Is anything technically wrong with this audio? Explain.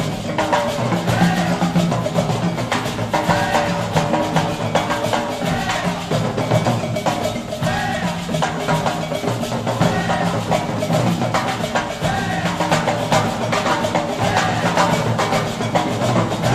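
No, nothing technically wrong turns up anywhere in this recording.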